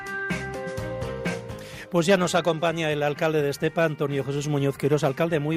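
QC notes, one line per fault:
No faults found.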